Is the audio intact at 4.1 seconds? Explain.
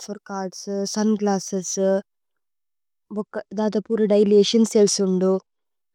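No. At 4.1 seconds the clip is in the middle of a Bluetooth SBC bit pool drop that runs from about 3.17 to 5.65 s. The link looks congested, so the encoder cut its bit budget, which fits a fall from a bit pool of around 31 to 15, near 105 kbps. The top sub-bands get starved and the rest are quantised coarsely, so the speech loses its treble and picks up a gritty noise until the rate recovers.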